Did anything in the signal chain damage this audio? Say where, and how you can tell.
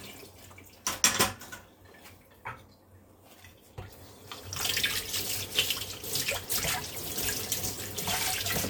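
No, nothing along the chain seems to have damaged these sounds, and I can't hear anything that would point to a problem at any stage.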